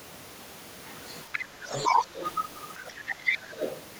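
Other side's voice leaking through first appears at 1.32 to 1.44 s as a faint second voice well beneath the talker, then returns louder from 1.65 to 2.3 s at roughly 15 dB down. The likely cause is loudspeaker playback that the echo canceller failed to fully subtract from the microphone.

Background gated by the echo canceller comes between 1.48 and 1.58 s. The room sound dips by about 11 dB, for around 70 ms in total, and then recovers. While the far end played, the canceller clamped the microphone path harder than the echo required, so the ambience briefly drops out.

Speech suppressed in double talk cuts into the talker at 2.75 to 2.82 s with a dip of roughly 25 dB. It strikes again at 3.06 to 3.16 s, where the talker's voice is nearly gone for about a tenth of a second. The second dip falls within the third stretch of leakage, from 2.86 to 3.8 s at roughly 20 dB down. With both sides talking at once, the canceller likely mistook the near talker for echo and attenuated that voice along with the leakage.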